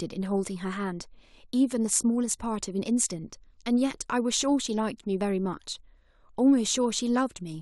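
Clock slip clicks run from 0.13 s to 7.61 s as a faint, fast ticking about every 40 ms that blurs into a soft rattle under the speech. Each tick is likely one sample dropped or repeated as two unsynchronised clocks drift apart by roughly 500 parts per million.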